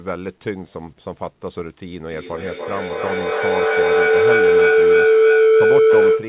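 From 2.07 s to the end, feedback howl takes over. Two devices share a room and the loop keeps gaining, so a tone around 400 Hz swells, the loop repeating roughly every third of a second and peaking about 11 dB above the speech. The band stops near 4 kHz, which fits a telephone-grade codec on the call path.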